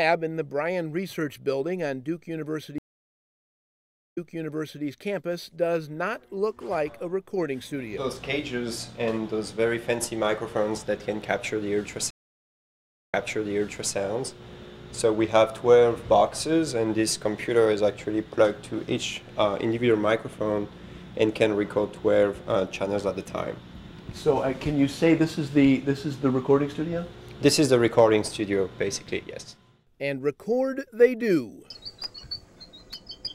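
The stream connection drops twice, and each time the player goes quiet, reconnects and starts a fresh decoder partway through the stream. This is a stream reconnect. At 2.78 s the audio falls silent for 1.35 s, then resumes 0.71 s earlier than where it stopped, so that stretch is heard again by 4.84 s. At 12.11 s a 1.0 s silence is followed by a jump back of 0.84 s, ending at 13.94 s. The backward jumps fit a server resending a burst of buffered audio, and the restarted decoder fades in its first frame each time.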